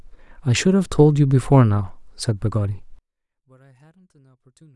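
From about 2.99 s to the end, the speech all but disappears in mono, dropping by about 37 dB. That's likely one channel inverted: with one side's polarity flipped, the shared centre content cancels, leaving only a faint trace of the difference between channels.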